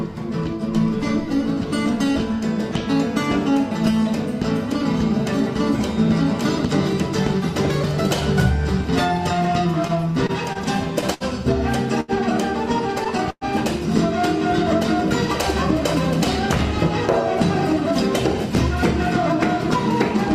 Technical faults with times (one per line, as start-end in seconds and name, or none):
9.87-11.23 repeated stalls (stutter)
12.00-12.11 short stall from a late packet
13.30-13.44 call audio freeze